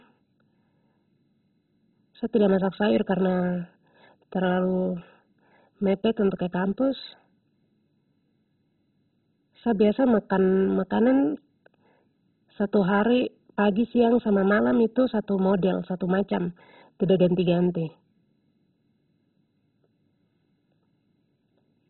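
From start to finish the speech sounds dull and gurgly, with nothing above about 4.1 kHz and a grainy, watery roughness on everything left. That's likely MP2 compression starved of bits, which fits a rate somewhere near 16 kbps. Layer II splits the signal into 32 sub-bands and has to drop the upper ones entirely when bits run short. Bands flicker on and off, and the remaining ones get quantised so coarsely that they churn, giving that heavy, low-rate digital-radio texture.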